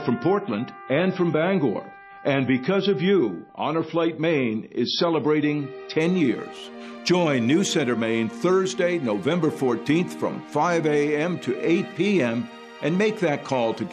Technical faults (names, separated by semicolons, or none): adaptive stream starting at a low bitrate